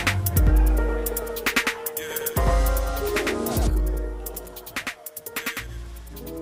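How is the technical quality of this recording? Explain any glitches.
The recording has one glitch. A doubled audio track runs throughout: a second, equally loud copy trails about a tenth of a second behind, likely captured twice through a slower path, giving a dry, slapback-like echo.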